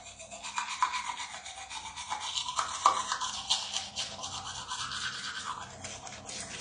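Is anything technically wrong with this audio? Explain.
Yes. Throughout the clip the sound shows AAC compression damage, likely from AAC-LC coding at a low rate, consistent with roughly 32 kbps. Nothing is present above 9.8 kHz, so the top end sounds dull, and the spectrum is plainly degraded, with a smeared, warbling, fizzy texture where the encoder starved bands of bits. A simple low-pass filter would also remove the top end but would leave the remaining range clean. The shifting, watery artefacts point to lossy coding instead.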